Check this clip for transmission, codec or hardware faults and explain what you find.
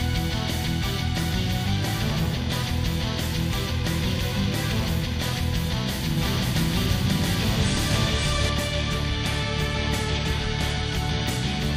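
One fault stands out, a doubled audio track between 6.17 and 8.49 s. A second full-band copy trails the original by about half a second at roughly the same level. The likely cause is the audio being captured again through a slower path, or an edit leaving two copies out of step. It sounds like a dry, abrupt echo with no room decay. On a spectrogram every pattern repeats about 0.5 s to the right, and the waveform shows the copy starting and stopping with hard edges.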